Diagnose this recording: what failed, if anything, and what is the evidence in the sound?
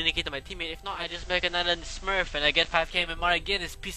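Digital radio blending to analogue, at the receiver: from 0.83 s to 3.11 s the sound cross-fades over about 409 ms to the FM simulcast, and back. Hiss rises to roughly 25 dB below the signal, and level shifts about 2 dB.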